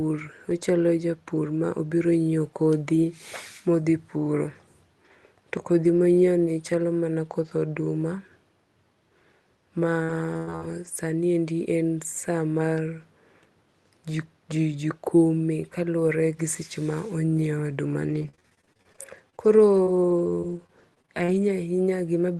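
Speech carried over a call path sounds choppy and robotic in two stretches, from 10.03 to 10.87 s and from 18.09 to 21.5 s. That is repeated packet loss, where audio repeatedly failed to arrive in time. Each hole was bridged by stretching the preceding sound, which gives the stuttering texture. The first stretch has a few holes, the longest about 98 ms, with roughly a quarter of the span patched. The second has many shorter dropouts, none over 42 ms, with about a seventh patched.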